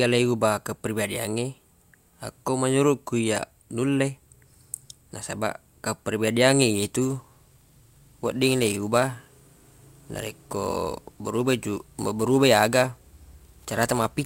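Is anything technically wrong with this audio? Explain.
Yes. From about 7.01 s to the end, there is sample clock jitter. The converter's timing wanders by a few microseconds, so samples land early or late. Steep, loud parts of the speech gain a hiss or roughness, roughly 20 dB below the signal. Pauses stay clean.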